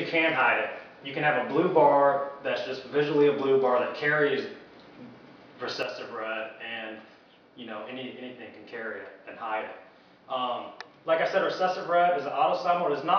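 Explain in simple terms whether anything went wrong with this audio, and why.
At 5.83 s the sound suddenly drops to roughly half its level and stays that way until the end at 13.18 s. The likely cause is that one channel drops out: one of the two stereo channels stopped delivering sound. When both sides are mixed into one, anything shared by both channels becomes noticeably quieter, and anything that was only in the missing side vanishes completely.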